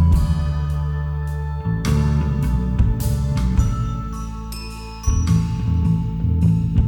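Brief crackles at 2.80 to 2.82 s and 3.58 s, then a longer stretch of milder crackle from 6.45 to 6.80 s: hard clipping, with peaks overdriven about 2 to 5 dB and flattened.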